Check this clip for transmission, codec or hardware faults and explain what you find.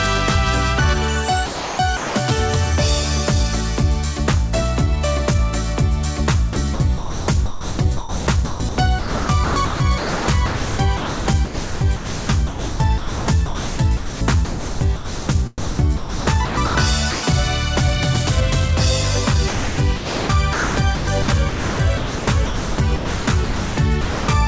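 Yes, there are faults here, and they all come from the sender's voice detector gating the sound. Everything arrives band-limited at 8 kHz, which fits G.722 at 64 kbps.

Sound chopped by the voice detector shows up at 1.46–2.15 s (about 510 ms filled), 6.53–15.29 s (5.34 s filled), 15.58–16.75 s (720 ms) and 19.48–24.28 s (2.88 s). It's likely the detector flipping on and off, swapping quieter bits for comfort noise, so the sound gets choppy.

Sound dropped by the voice detector hits once, at 17.11–17.23 s. For about 120 ms the sound simply vanishes into steady comfort noise before returning. That's likely the detector mistaking quiet sound for background and briefly stopping transmission until it retriggered.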